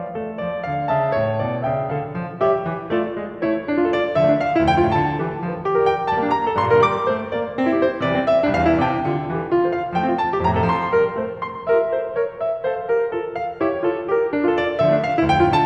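No technical faults are audible.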